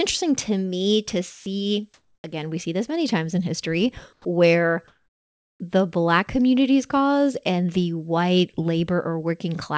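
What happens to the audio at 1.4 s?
From 1.31 to 1.46 s, about 150 ms of the speech gives way to steady noise or near silence and then resumes. This is sound dropped by the voice detector, most likely the sender's detector mistaking a quiet stretch for background, stopping transmission, and the receiver filling the gap with comfort noise. Unlike packet-loss concealment, nothing is smeared or repeated from the surrounding audio, and unlike a hard dropout, the gap holds even noise rather than dead silence.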